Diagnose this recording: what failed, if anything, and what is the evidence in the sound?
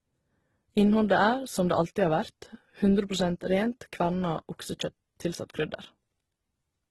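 Codec stage: the speech is likely transcoding between lossy codecs, with two low-bitrate encoders in series throughout. Nothing above 12.2 kHz survives, and two distinct sets of artefacts sit on top of each other, which fits an HE-AAC pass at around 16 kbit/s followed by Opus at a similar rate re-encoding the first codec's errors.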